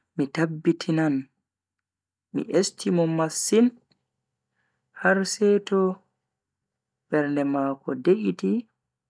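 No technical faults can be heard anywhere in this recording. The speech runs without any dropout, click, distortion or other audible problem.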